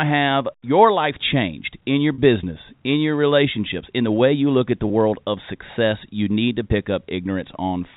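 At 2.14 s and 4.88 s there's packet loss with pitch repetition: gaps of 40 ms and 20 ms, which fits two 20 ms packets and then one. The receiver bridged each by looping the last pitch period, so the speech briefly hangs on a slightly buzzy held note.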